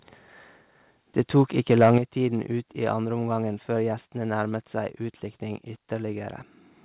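From 1.19 to 1.41 s and again from 1.71 to 1.98 s, loud peaks turn harsh and crackly, likely microphone overload. Unlike codec grit, the distortion tracks only the loudest moments. The second burst exceeds the limit by about 5 dB rather than about 1 dB, flattening a few percent of samples instead of a sliver. At 1.98 s, voice and background drop together by about 8 dB in a single step, likely the microphone volume stepped down. A fade would glide, but this lands instantly, right after the distortion, heard through the call's narrow band with nothing above 4 kHz.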